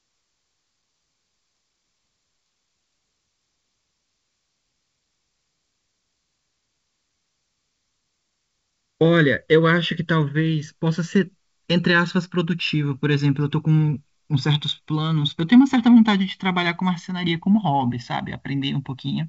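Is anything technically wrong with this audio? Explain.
Yes. Channels drifting apart affects the whole speech clip, from start to finish. The two channels appear to have been captured on devices with independent clocks that disagree by something like 50 ppm, so the delay between them grows steadily, reaching about a millisecond by the end. When the channels are summed to mono, that sliding offset sweeps comb-filter notches slowly through the spectrum, heard as a gradual flanging whoosh on the speech. The band limit near 7.7 kHz fits G.722 wideband telephone coding.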